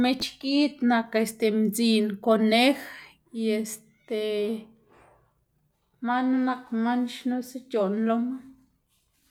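Speech recording, no audible technical faults anywhere in the clip.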